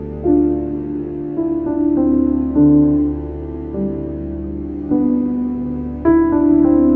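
A short piece of music with no technical faults to report. Nothing in it calls for a time or a cause.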